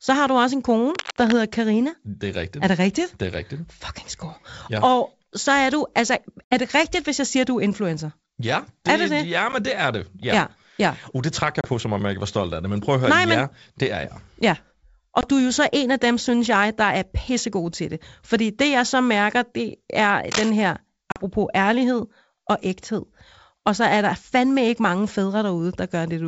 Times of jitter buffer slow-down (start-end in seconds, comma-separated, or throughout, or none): none